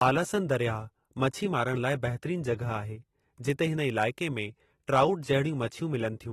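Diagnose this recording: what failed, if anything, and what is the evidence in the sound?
The failure is at the codec stage, most likely AAC compression at a low bitrate. Throughout the speech, nothing sounds above 13.9 kHz, and the codec damage is plainly audible: dulled, smeared sibilants with a fizzy, warbling texture. Both point to a bitrate around 30 kbps, starving the quantiser.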